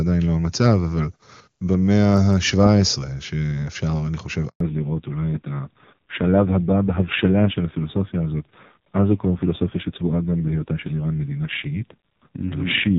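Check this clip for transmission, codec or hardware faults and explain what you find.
Two faults appear, both at about 4.5 s. A handover gap at 4.48 to 4.60 s leaves 120 ms of silence while the call switches networks, so no frames arrive. The waveform falls to a flat line there. Right after it, at 4.60 s, comes a fallback to narrowband. The clear HD Voice wideband sound gives way to a duller, rougher narrowband codec, which fits a low rate near 5.9 kbit/s. On a spectrogram, all energy above 4 kHz is cut off sharply from that point to the end.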